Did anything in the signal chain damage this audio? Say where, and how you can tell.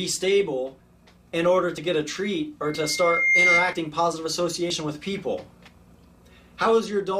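Yes. At the buffer stage, audio goes missing between chunks, likely from a one-second chunk boundary dropping a few tens of milliseconds, heard as abrupt skips at 1.78, 3.73 and 4.70 s.

In the playback and capture loop, a microphone hearing its own loudspeaker causes loudspeaker feedback squeal: a 2.1 kHz tone swelling from 2.64 to 3.84 s, building over under a second to about 5 dB above the sound.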